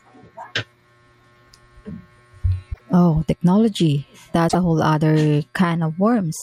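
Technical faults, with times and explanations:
2.70–2.81 s and 4.45–4.55 s (just before "a whole"), damaged data in a compressed stream: each is a short glitch in the speech, lasting about 0.1 s. Corrupted bytes make the decoder misread those frames and lose sync until it finds the next valid frame header.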